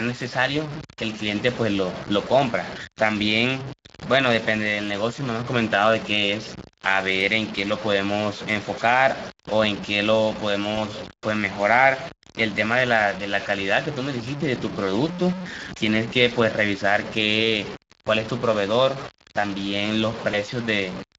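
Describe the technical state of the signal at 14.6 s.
At 14.6 s the speech is gritty, with grainy distortion that rises and falls with the sound, most likely low bit depth without dither. That grain suggests truncation to about 5 bits, with the error roughly 15 dB below the signal.

The Speex codec damage is plainly audible there too, as a hoarse, noisy edge to the speech. That fits a mid-rate CELP setting around 20 kbps, which leaves too few bits for the excitation. Both faults run through the whole clip, not just this moment.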